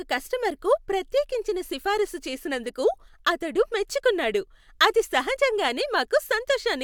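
Nothing in the speech recording stood out as a technical fault on listening.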